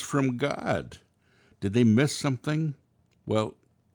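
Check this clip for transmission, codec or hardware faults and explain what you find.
No transmission, codec or hardware fault can be heard anywhere in this speech recording.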